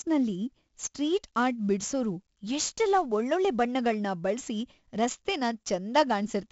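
The speech is marked by 4-bit ADPCM compression from start to finish. Each sample is stored as a coarse 4-bit step from a predicted value, and the step size adapts as the sound changes. Here the damage is heavy. A gritty hiss rides on every loud syllable and rises and falls with the level. The sound is dull, which fits a 16 kHz rate at a bitrate of 64 kbps.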